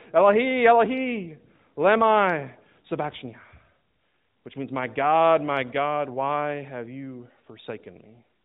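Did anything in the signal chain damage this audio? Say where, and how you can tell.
No, nothing in the chain has damaged this speech beyond what its AMR narrowband mobile codec path does by design at about 12.2 kbps, which fits the narrowband ceiling near 4 kHz and the light coding texture you would expect from that mode.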